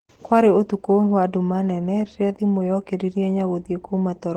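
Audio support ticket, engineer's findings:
Opus voice compression, entire clip. Speech hoarse, slightly robotic, codec damage plainly audible. Probable hybrid mode: linear-prediction coding below 8 kHz, coarse transform layer above, consistent with about 16 kbps. Spectrogram shows nothing above 20.1 kHz, 20 ms frames.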